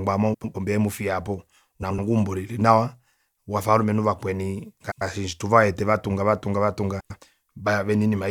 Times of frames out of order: 0.34-0.55, 1.82-1.99, 4.81-5.02, 7.00-7.18

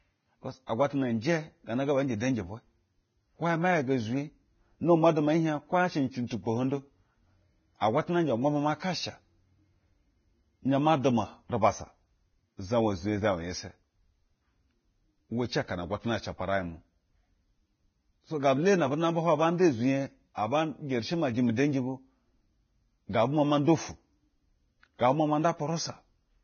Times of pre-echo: 0.67-0.69, 6.27-6.30, 20.35-20.37

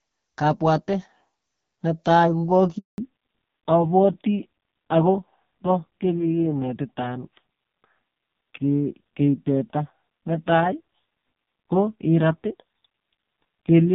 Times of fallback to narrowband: 2.98-13.94

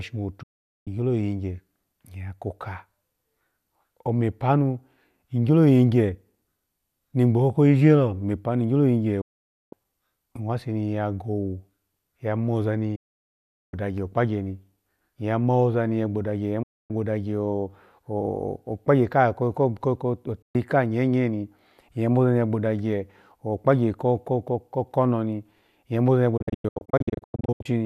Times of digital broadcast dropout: 0.43-0.87, 9.21-9.73, 12.95-13.74, 16.63-16.91, 20.42-20.55, 26.37-27.66

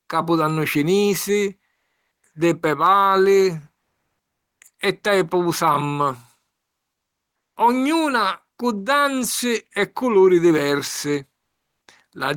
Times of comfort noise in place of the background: 1.75-2.23, 3.79-4.57, 6.55-7.51

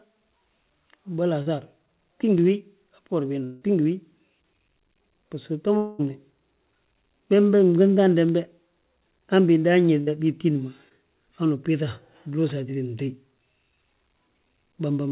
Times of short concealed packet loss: 1.42-1.48, 10.89-10.92

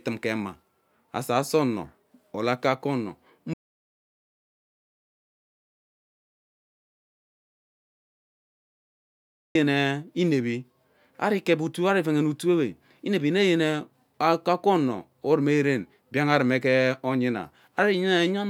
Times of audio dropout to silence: 3.54-9.55

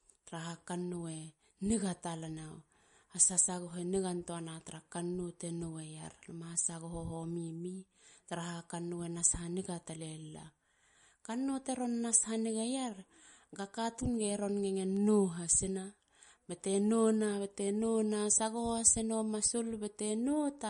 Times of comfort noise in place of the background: none

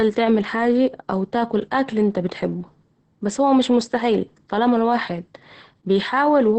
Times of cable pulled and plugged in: none

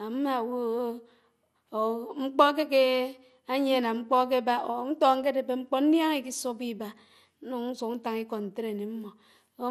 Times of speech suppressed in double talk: none

